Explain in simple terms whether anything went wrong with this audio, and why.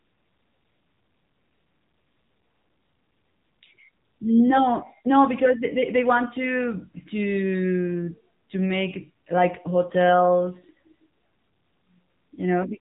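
The speech sounds thin, muffled and plainly buzzy from start to finish, like an old mobile phone call. That is AMR narrowband mobile codec damage: the phone-call codec discards everything above about 3.8 kHz and rebuilds the voice from a simplified model.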